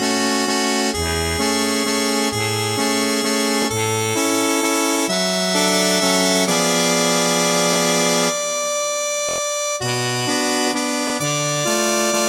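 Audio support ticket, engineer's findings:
Repeated buffer, four stutters: 3.62–3.65 s, 7.73–7.76 s, 11.08–11.10 s (one repeat each of a 23 ms block), 9.29–9.38 s (four repeats). Playback device underrun; last buffer replayed when new data arrived late; 23 ms fits a 1024-sample buffer. Roughly 20 ms of audio lost per single repeat, about 100 ms at 9.29 s. Waveform: identical copied segments, hard discontinuity at each join. Spectrogram: vertical broadband lines at joins, repeating pattern.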